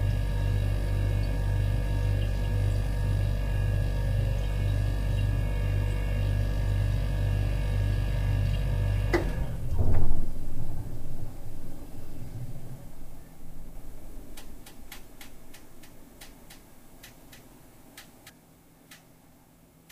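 A doubled audio track runs from 13.76 to 18.30 s in this recording of everyday sound: a second full-band copy trails the original by roughly 300 ms, sitting around 5 dB lower. The copy carries no decay or room colouring, so it reads as a clean repeat rather than an echo, and it cuts in and out abruptly at those times. The likely cause is the signal being captured twice, once through a slower path, or an edit leaving two misaligned copies.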